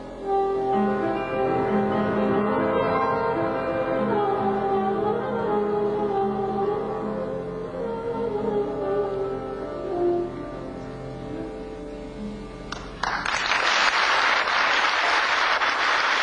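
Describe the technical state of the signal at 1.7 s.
Around 1.7 s the audio is intact, with no dropout, distortion, glitch or other fault at that point.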